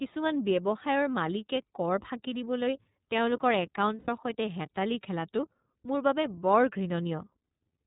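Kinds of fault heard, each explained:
iLBC codec: This narrowband VoIP coding runs through the entire speech clip and codes each frame's excitation without relying on the previous frame. The damage is plainly audible as a slightly rough, synthetic edge on the voice. On a spectrogram, all energy stops at a flat ceiling near 4 kHz with nothing above it. The sound fits the 13.33 kbps mode with 30 ms frames.
Lost iLBC frames: Between 3.98 and 4.09 s, just after "কৰ ফাঁকি দিবলৈ তেওঁলোকৰ" and before "সৈতে হেতালি খেলাটো মোৰ", packets went missing. The decoder filled the gap by repeating the last pitch cycle blended with noise, so about 90 ms sound like a held, buzzy-breathy vowel. This fits three lost 30 ms frames. The spectrogram shows frozen, smeared harmonic bands, and the waveform shows a repeating cycle. The voice recovers almost immediately afterwards.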